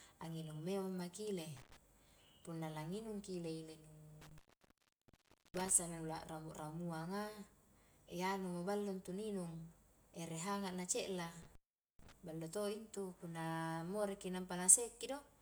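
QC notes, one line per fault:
1.56–1.77 s, 4.22–5.71 s, 11.43–12.12 s: intermittent contact. The speech drops out for about 0.10 s, 1.16 s and 0.44 s as a loose plug or cable briefly opens the signal path, leaving faint hiss in the gap and crackle where contact breaks and returns.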